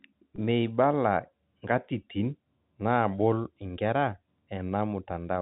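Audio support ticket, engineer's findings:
Packet loss with pitch repetition, 0.36–0.38 s. Brief held, buzzy sustain replacing about 20 ms of speech, which fits a single lost packet. Component: receiver jitter buffer and concealment. The last pitch period is looped to bridge the gap. Band-limited G.711 telephone coding is audible across the clip.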